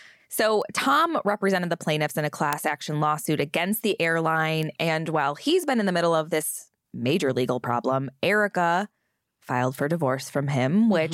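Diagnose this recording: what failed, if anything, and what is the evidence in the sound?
Three isolated ticks at 0.62 s, 2.53 s (between "the plaintiffs in a" and "action lawsuit against the") and 4.63 s are bit error spikes from a flipped bit in storage or on a digital link. Each is a single sample that leaps to about -19, 0 and -12 dBFS and returns at once, giving a broadband click unrelated to the speech. A buffer dropout would leave a gap or discontinuity instead, and clipping would follow the waveform's peaks.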